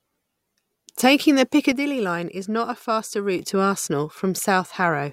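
At 1.72 s the speech and its background noise drop together by about 6 dB, then snap back up at 3.39 s. That's a sudden gain jump, likely a gain setting applied instantly rather than ramped, so each level change lands abruptly instead of easing in.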